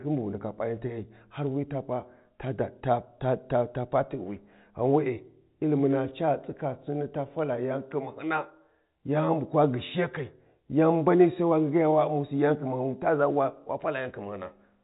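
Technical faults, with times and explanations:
No technical faults are present; the speech carries the normal narrow band of G.711 telephone coding, with nothing audible above about 3.8 kHz.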